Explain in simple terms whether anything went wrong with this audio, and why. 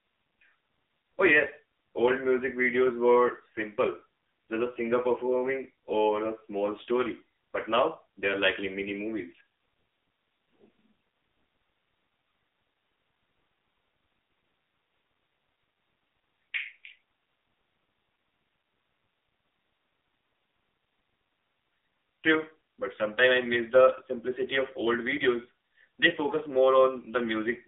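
From start to finish, the AMR narrowband mobile codec removes everything above 3.8 kHz and adds a buzzy, synthetic edge that simple muffling wouldn't.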